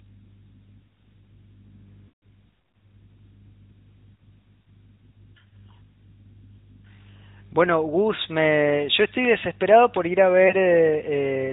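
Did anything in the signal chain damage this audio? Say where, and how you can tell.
Yes. At the codec stage, the whole clip carries the AMR narrowband mobile codec sound. Nothing above 4 kHz survives, and the speech has a plainly audible buzzy, synthetic edge from the pulse-driven vocal-tract model. That roughness fits a mid-rate mode around 10.2 kbps.

At the network stage, there are lost AMR speech frames. From 2.08 to 2.22 s, about 140 ms of speech smears into a drawn-out, decaying tone as the decoder repeats its last pitch and filter settings with falling gain. From 10.48 to 10.55 s, a single 20 ms gap gives a brief dip or warble.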